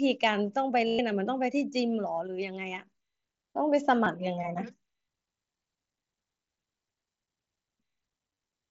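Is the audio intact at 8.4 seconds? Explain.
No. From 8.34 to 8.37 s a brief buzzy, held tone replaces the sound, with a slight warble as it returns. This is concealed Bluetooth headset packet loss: about 22.5 ms of packets never arrived, so the receiver filled the gap by repeating its best-matching recent stretch of waveform.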